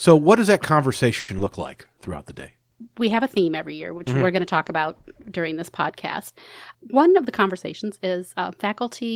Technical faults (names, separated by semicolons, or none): repeated packet loss (robotic sound); call bitrate drop; jitter buffer speed-up